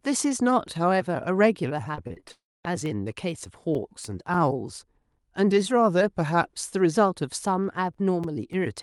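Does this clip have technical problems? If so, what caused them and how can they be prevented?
Yes. From 1.95 to 2.32 s, repeated packet loss (robotic sound) leaves five short gaps, the longest 24 ms, patched by repeating the last sound. That concealment covers about 29% of the stretch. The spectrogram shows choppy, smeared harmonic bands. A jitter buffer with forward error correction would prevent it.

From 2.32 to 2.65 s, the audio turns into a fading buzz and then near-silence for about 0.23 s, before resuming with a section missing. This is likely a long network dropout. The waveform collapses to a flat line. Redundant transmission or a more stable connection would prevent it.

CD scratch ticks appear as seven ticks between 2.86 and 4.64 s and four between 7.64 and 8.53 s, roughly four per second. Each lasts only a few milliseconds, where the player interpolated or muted over unreadable data on each rotation. 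They show as thin vertical lines in the spectrogram. Cleaning the disc or ripping it with error-retrying software would prevent them.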